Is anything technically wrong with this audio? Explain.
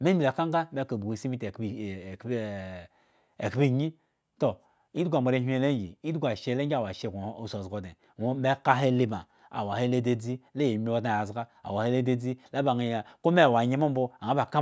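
No, nothing is technically wrong with this speech recording.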